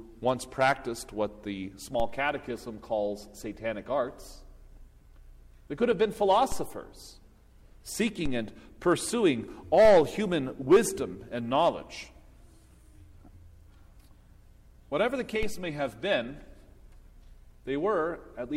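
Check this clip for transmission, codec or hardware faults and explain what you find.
Five DC steps, each a brief low thump at 2.00, 6.52, 8.26, 9.85 and 15.43 s. The waveform's zero line jumps by about -23 dBFS (about -22 dBFS at 15.43 s), then decays away through a 2 Hz high-pass.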